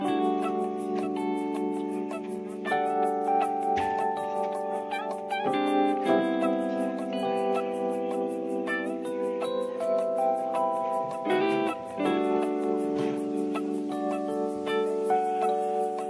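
No faults heard anywhere in the audio.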